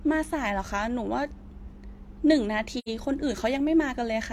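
At 2.78 s, the speech drops into a short silence lasting until 2.89 s. This is AAC frame loss with muting. The decoder received no data for this stretch, so it filled the missing spectrum with zeros. About 85 ms went missing, which fits two lost frames. The overlapping transform windows blend the silence with its neighbours. The sound fades out, stays empty, then fades back in. The hole has soft edges.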